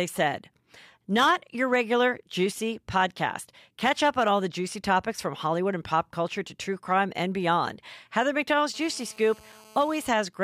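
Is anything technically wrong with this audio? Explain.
Yes, two kinds of interference from a nearby 2G mobile phone intrude near the end of the speech.

GSM phone buzz runs from 8.74 to 10.04 s. A phone in an active call transmits radio bursts 217 times a second, and the audio circuitry rectifies them into sound. The result is a hard, raspy 217 Hz buzz rich in harmonics, about 27 dB below the speech and unrelated to it.

GSM signalling bursts follow from 10.04 to 10.34 s. The phone is still on the call, but its user has fallen silent, so it sends only short groups of bursts. Rectified the same way, these give faint, even ticks with a longer 217 Hz buzz twice a second, roughly 30 dB down.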